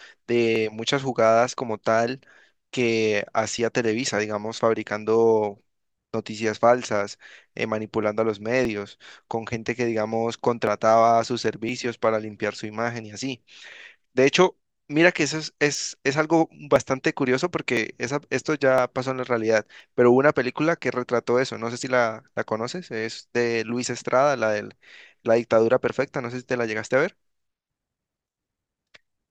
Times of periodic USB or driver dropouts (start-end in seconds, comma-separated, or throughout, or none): 0.56-28.93